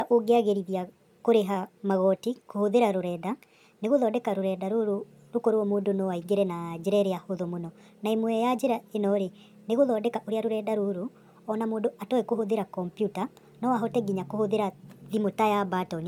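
From start to finish the speech runs fast and sounds high, hurried and chipmunk-like, with pitch raised about 5.5 semitones and everything moving about 1.38 times quicker than it should. This is a wrong sample rate fault. The audio was captured at 32 kHz but is being played back at 44.1 kHz with no resampling, so each second of recording is squeezed into less time, lifting speed and pitch together by the same ratio.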